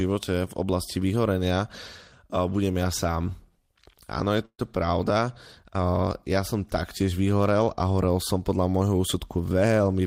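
At 4.45 to 4.61 s, packets were likely delayed and the jitter buffer ran dry, a call audio freeze: the last sound is stretched, then 60 ms of silence, before resuming with nothing lost. At 9.49 to 10.01 s, an overfull jitter buffer trimmed about 70 ms of pitch periods, a jitter buffer speed-up, so the speech runs hurried at 114% speed without a pitch change.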